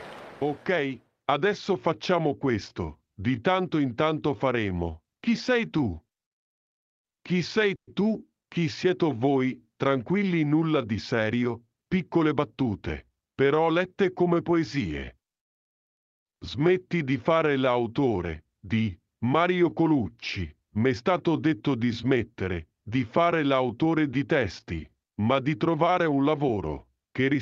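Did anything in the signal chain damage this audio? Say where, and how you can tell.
Yes. There is a call audio freeze at 7.75 to 8.00 s, likely from late network packets. A 120 ms fading fill is followed by 110 ms of silence, and nothing is lost.

A jitter buffer speed-up runs from 12.14 to 13.41 s. Speech plays 9% fast at unchanged pitch. The buffer cut short pitch-period pieces totalling about a tenth of a second.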